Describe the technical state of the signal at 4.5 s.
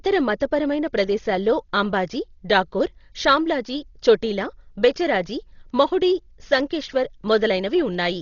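Heavy Dolby Digital compression, likely from an encoder starved to around 32 kbps, spans the whole clip including 4.5 s. Nothing above 6.9 kHz survives, and dither-filled gaps leave the speech dull and roughly fluttering.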